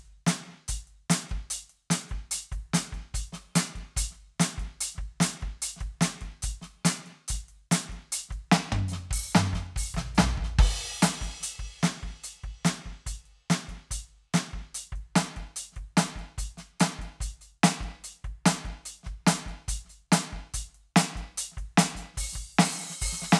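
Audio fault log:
No faults detected in music.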